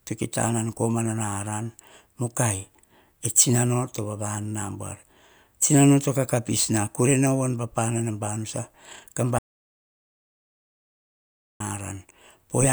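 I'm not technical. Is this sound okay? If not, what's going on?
No, there's one problem. At 9.39 seconds the speech suddenly cuts out and nothing comes back until 11.60 seconds. That's an audio dropout to silence. For a bit over two seconds there's total silence, not even the faint background hum of the room, so whatever was said in that stretch is simply gone. That likely happened because the microphone connection or link briefly dropped out while the recording kept running.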